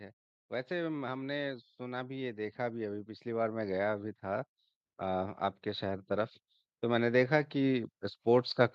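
From 0.68 s to 8.56 s, automatic gain rising sets in. The gain control climbs about 15 dB slowly, so voice and background swell together.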